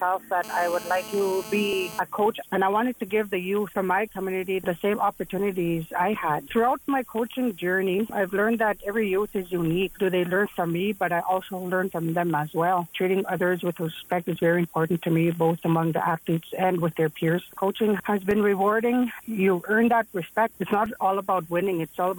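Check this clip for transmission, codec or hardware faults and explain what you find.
There's one fault here: GSM phone buzz, from 0.44 s to 2.0 s. A 2G handset close by was transmitting in bursts about 217 times a second, and the audio circuitry rectified those radio pulses into the signal path. You hear a hard, raspy buzz at 217 Hz, full of harmonics, sitting about 15 dB below the programme and unrelated to it. It stays steady throughout, which fits the phone being on a call.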